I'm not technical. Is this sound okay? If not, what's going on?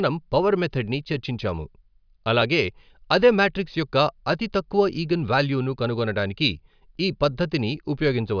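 Yes, nothing in this speech recording sounds wrong. There's no technical problem anywhere in it to point out.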